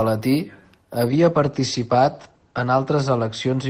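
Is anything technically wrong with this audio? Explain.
Yes. From 1.09 s to the end, the speech turns rough and muffled, losing its top end, worst for about 1.56 s. This is a call bitrate drop: the encoder fell from 32 to 13 kbps, coding more coarsely and narrowing bandwidth from 20 kHz to 8 kHz.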